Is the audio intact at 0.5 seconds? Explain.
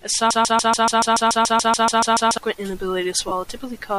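No, 0.5 s falls inside a broken-record loop from 0.31 to 2.38 s: a 143 ms fragment repeats 14 times, likely from a stalled stream resending its last chunk.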